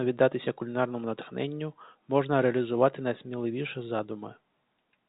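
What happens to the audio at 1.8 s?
Nothing goes wrong at 1.8 s: the speech carries on intact through that moment, with the same telephone-band G.711 sound, capped at about 3.8 kHz, that it has around it.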